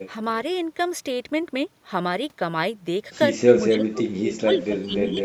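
From 3.68 to 4.28 s, the speech sinks sharply, at worst by around 30 dB. It returns briefly, then dips again from 4.44 s to the end, more gently, by around 15 dB. This is speech suppressed in double talk. Likely cause: both ends spoke at once, and the echo canceller mistook the local talker for loudspeaker echo. It then turned the whole signal down.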